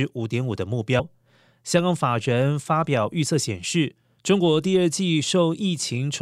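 At about 0.98 s the speech jumps forward as compressed frames are skipped, missing roughly 150 ms, which fits about five lost 26.1 ms frames. Unlike a dropout there is no silent gap.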